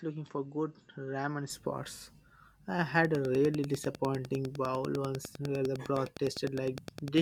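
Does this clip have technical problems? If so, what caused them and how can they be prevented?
Yes. From 0.0 to 1.5 s the speech is duller and about 5 dB quieter, with nothing above 7.9 kHz, then clears without any gap, pointing to an input switched to a poorer device. Unlike a filter, the level and a faint new noise floor change too. Locking the input device in the recording settings prevents it.

From 3.05 to 7.19 s a train of clicks, roughly forty of them, ticks at a steady 9.9 per second, peaking around 10 dB above the speech and continuing through pauses. That regularity, unlike random crackle, likely means interference from nearby equipment or a faulty connection or power supply. Moving cables and devices apart, or checking connections and the power supply, prevents it.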